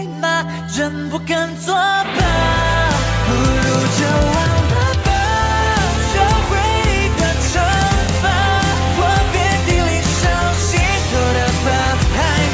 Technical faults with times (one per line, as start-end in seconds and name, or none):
none